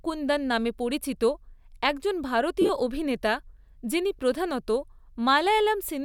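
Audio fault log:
2.61–2.70 s, lost LE Audio frames: just before "অভিনেতা যিনি প্রধানত" the sound turns briefly to a noisy smear. Dropouts of about 68 ms are spread over 75 ms, the longest around 40 ms, which fits roughly nine lost frames. The decoder filled them by replaying the last spectrum with scrambled phase.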